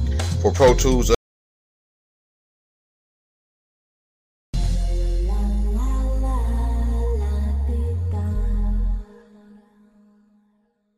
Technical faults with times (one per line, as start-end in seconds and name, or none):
1.15-4.54 audio dropout to silence